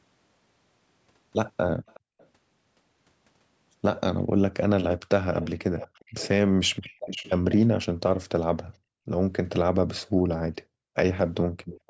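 From 1.87 to 2.27 s a faint repeat of the speech trails the original by about 370 ms, very low at roughly 25 dB down. From 4.89 to 6.28 s and 6.86 to 7.39 s a stronger copy arrives about 460 ms late, some 15 dB below the speech. Shorter scraps at the same delay follow at 9.90 to 10.01 s and 11.71 to 11.80 s, about 20 dB down. This is echo leak, likely from a loudspeaker on the far side whose echo canceller let part of the returning sound slip back.

Between 6.97 and 7.08 s the room background dips by as much as about 31 dB. From 10.1 to 11.57 s it falls away, as deep as about 40 dB and for around 0.7 s in total. This is background gated by the echo canceller, which sharply turned the microphone down while the loudspeaker was playing.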